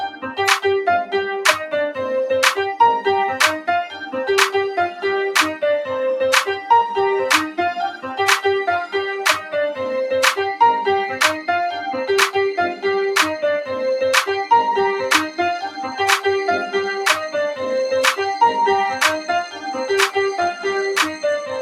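From the start and all the way through, a noise suppressor applied to music or sounds keeps treating steady material as noise. Held tones and decaying tails are pulled down while sharper onsets pass, so the level swings by something like 5 dB and the sound flutters and thins. Unlike a compressor's pumping, the dips don't follow loudness. They follow how steady the sound is, which is why tails sink but attacks mostly get through.

Three moments stand out as sound cut by the noise suppressor. At 0.09 to 0.24 s the level falls by about 11 dB, at 3.89 to 4.14 s by about 7 dB, and at 19.46 to 19.66 s by about 8 dB. Each time the sustained part is ducked or its decay is cut short. A true dropout would go to silence, but these are partial, shaped reductions that leave the transient edges audible.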